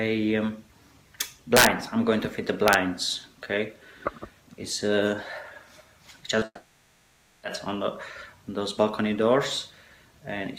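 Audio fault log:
1.57–1.67 s and 2.68–2.74 s, integer overflow. Loud peaks exceed the largest value the samples can hold. Instead of being held at the limit, they wrap around to the opposite sign. Each wrapped peak jumps across the full range in one sample, which produces a violent crack far harsher than clipping. The first burst is driven about 7 dB past the limit and cracks hard. The second is only about 1 dB over and is briefer and milder.
6.39–6.43 s, short concealed packet loss. About 20 ms of audio never arrived in time. The receiver filled the gap by extending the last sound, then blended back into the real signal. The patch is short, so it is heard as a small smear or wobble rather than a gap. The 20 ms of original sound it replaced is gone.
6.45–7.45 s, long network dropout. The sound stops arriving for about a second, and roughly 980 ms of it is lost for good. The receiver stretches the last sound into a fading buzz or hiss to cover the hole, with about 50 ms of outright silence. 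Audio then resumes further on, with the missing stretch skipped. The abrupt resumption after a decaying tail likely points to a network interruption rather than a local fault.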